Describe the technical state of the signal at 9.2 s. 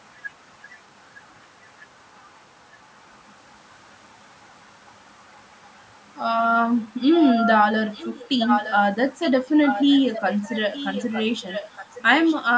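At 9.2 s a brief echo leak appears, lasting until about 9.32 s: a faint, delayed copy of the speech, roughly 15 dB below it and trailing the original by about 0.91 s. It is likely a far-end loudspeaker echo that the echo canceller failed to fully remove. On a spectrogram it shows as a weak, short ghost of earlier speech patterns, capped like everything else at 8 kHz. On the waveform it is a small, low-amplitude burst.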